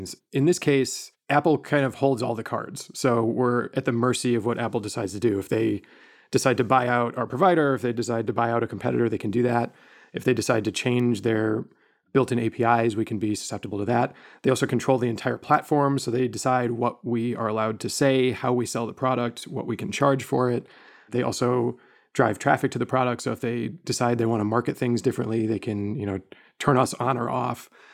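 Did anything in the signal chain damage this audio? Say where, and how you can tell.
Yes: a bit error spike at 11.00 s, between "they decide to" and "their built in". A flipped bit in memory or on a digital link threw two adjacent samples off by a power of two, reaching about -25 dBFS, heard as one broadband tick unrelated to the speech.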